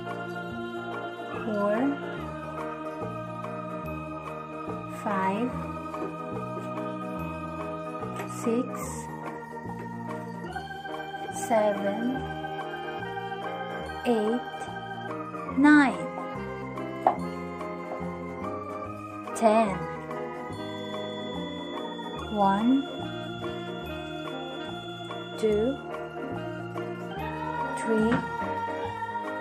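From 20.45 s to 25.90 s a feedback whistle sits behind the sound: a thin, steady tone near 3.4 kHz, about 15 dB below the main signal, swelling and fading slowly in level. The likely cause is a loudspeaker-to-microphone loop held just at the edge of instability, sustaining one frequency without building up. Unlike a full feedback howl, it never builds into a howl or runs away. Unlike a fixed electrical whine, its level drifts slowly rather than staying constant.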